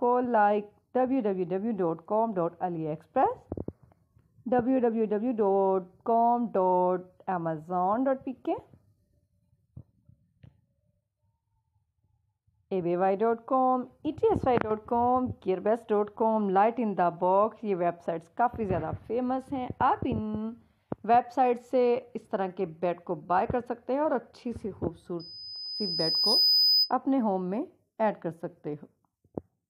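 A piercing 5 kHz tone swells over about a second from 25.19 to 26.93 s, rising above the audio: loudspeaker feedback squeal, where the microphone re-amplifies its own loudspeaker output.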